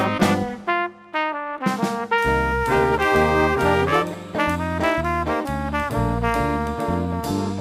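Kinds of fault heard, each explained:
Crude rate conversion: from about 2.18 s to 7.27 s the sample rate gets changed by just repeating the nearest sample, no filtering, consistent with a 44.1 kHz to 48 kHz jump. That leaves a gritty, inharmonic fizz riding the louder, brighter parts, roughly 30 dB down.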